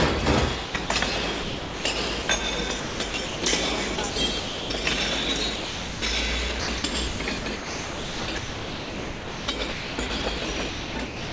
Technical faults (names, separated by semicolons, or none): sound chopped by the voice detector; sound dropped by the voice detector